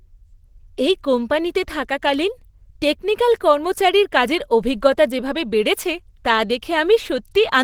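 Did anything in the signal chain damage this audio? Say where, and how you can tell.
Yes, at the codec stage, throughout. The speech sounds hoarse and grainy, likely from Opus compression in its hybrid mode at a low rate near 16 kbps. The encoder fills bit-starved upper bands with noise, so a spectrogram shows grainy, smeared texture up to about 20.2 kHz, without holes.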